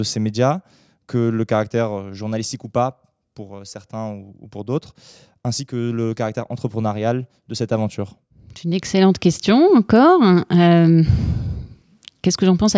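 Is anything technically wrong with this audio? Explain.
No, I hear no technical fault anywhere in this speech recording.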